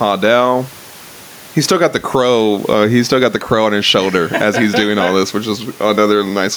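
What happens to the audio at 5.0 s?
Gain pumping is present at 5.0 s, as throughout the speech, likely from excessive microphone gain driving a fast limiter, with a gain swing of roughly 10 dB that brings loud and soft parts closer in level and squashes the sound.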